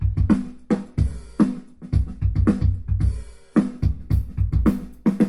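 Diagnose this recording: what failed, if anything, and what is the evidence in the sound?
Looks like an adaptive stream starting at a low bitrate, a playback/network issue. From 0.0 to 3.79 s nothing reaches above 11.2 kHz and the codec artefacts are stronger, which fits something like a 48 kbit/s MP3. Then it jumps cleanly, with no gap, to what sounds like 128 kbit/s once the player had sized up the connection.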